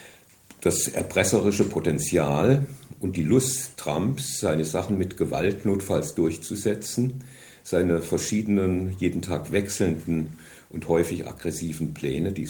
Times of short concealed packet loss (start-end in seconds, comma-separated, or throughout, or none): none